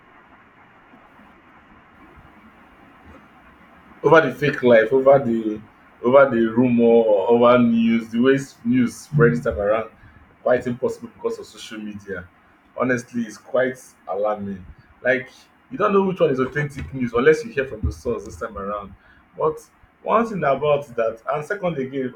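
No technical faults can be heard anywhere in it.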